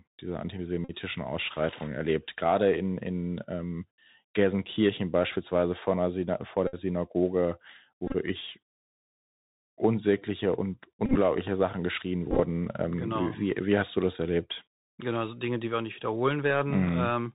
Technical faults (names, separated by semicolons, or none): Bluetooth CVSD headset codec; Bluetooth headset packet repeated